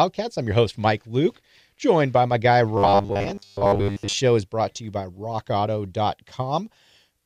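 From 2.77 to 4.13 s the speech takes on robotic sound from repeated short buffers: a hard, metallic buzz locked at 100 Hz that still loosely tracks the words. The likely cause is audio arriving too slowly, so playback keeps looping the last short chunk, something around 10 ms, which fits that 100 Hz pitch, while the real audio gets skipped. Most of that stretch is repeated material rather than fresh sound.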